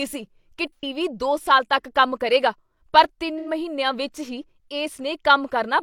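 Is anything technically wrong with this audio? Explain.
Yes. There are two brief dropouts from AAC frame loss with concealment in this speech. The first runs from 0.76 to 0.84 s, just after "ਸੀ ਕੀ". The second runs from 3.38 to 3.49 s, between "ਤੱਕ ਕੰਮ ਕਰੇਗਾ ਪਰ" and "ਵਿੱਚ ਹੀ". Each gap points to roughly 85 ms of missing audio, about two AAC frames. The decoder patched it from the last good spectrum, so each spot sounds smeared and noisy. On a spectrogram the harmonics blur into a flat, frozen band. The waveform shows an even, featureless envelope there.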